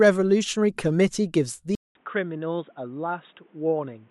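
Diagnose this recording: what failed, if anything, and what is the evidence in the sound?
At 1.75 s the speech drops out for about 200 ms, then returns dull and boxy, with nothing above 3.8 kHz, roughly 10 dB quieter and over a new noise floor. At the driver or device stage, the input likely switched to a poorer device for the rest of the clip.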